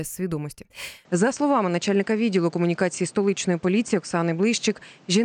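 At 1.05 s the speech abruptly turns duller and boxier, with nothing above 8.8 kHz, a level shift of around 5 dB and a new noise floor roughly 30 dB down. There's no gap at the change. Likely cause: input switched to a poorer device.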